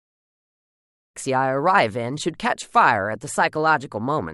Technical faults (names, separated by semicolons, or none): none